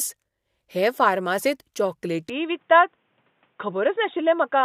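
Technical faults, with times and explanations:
2.30 to 4.65 s, input switched to a poorer device: the speech turns dull and boxy with no gap at the switch. Nothing above 3.8 kHz remains. Level holds steady. A faint new noise floor appears, well below the speech. Likely a change to a narrower-band microphone.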